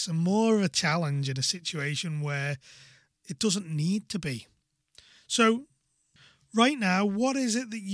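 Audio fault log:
No technical fault can be heard anywhere in this speech recording, and the signal stays continuous and stable throughout.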